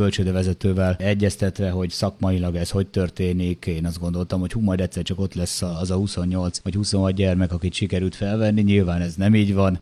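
At 5.63 s the sound shows a digital radio blending to analogue: the receiver loses the digital stream and cross-fades over about 141 ms to the FM broadcast of the same station. From there a faint hiss appears roughly 40 dB under the signal, and the level drops by about 1 dB. At 9.16 s it blends back to digital, removing the hiss.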